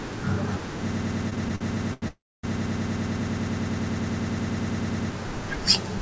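From 0.91 s to 5.11 s the speech locks into a broken-record loop. A fragment about 0.10 s long repeats exactly, back to back, 36 times, giving a rapid mechanical chatter at roughly ten repeats per second. The sender most likely stalled and kept replaying the last piece it held, so the speech that belonged to those four seconds never arrives. On a spectrogram this appears as an identical vertical pattern stamped at regular 0.1 s intervals. The waveform shows the same small block copied end to end.

Between 1.30 s and 2.04 s, repeated stalls (stutter) break up the sound. Five times the jitter buffer ran dry because packets came in late. Each time the receiver stretched the last sound to fill the wait. These fills add up to 171 ms, nearly a quarter of that stretch, and the longest is 85 ms. Nothing is lost, but the audio drags and hiccups. On a spectrogram the short smeared patches interrupt the repeating pattern. 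The waveform shows brief flattened, sustained segments.

From 2.08 s to 2.45 s comes a call audio freeze. Packets were held up, most likely on the network, and the buffer emptied. The receiver extended the last sound briefly and then faded it, leaving about 270 ms of silence within a 355 ms hold. Afterwards the sound resumes where it stopped, 355 ms late. A spectrogram shows a blank column, and the waveform drops to a flat line. Throughout the clip the spectrum stops at 8 kHz, which fits a wideband call codec.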